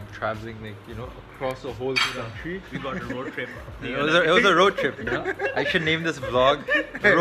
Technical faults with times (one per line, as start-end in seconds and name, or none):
1.51 bit error spike